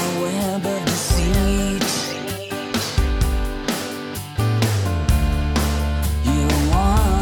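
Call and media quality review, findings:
No audible faults found anywhere in the clip; nothing to escalate.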